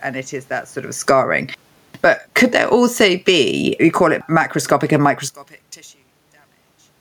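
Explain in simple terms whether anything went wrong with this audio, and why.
From 0.95 to 1.26 s, and again from 1.89 to 5.03 s, the speech and its background sink together. This is automatic gain falling: the level control decided the input was too loud and turned it down.

From 5.28 s to the end, the speech almost vanishes, leaving only a faint trace. The likely cause is one channel inverted, so the two stereo sides cancel each other when combined.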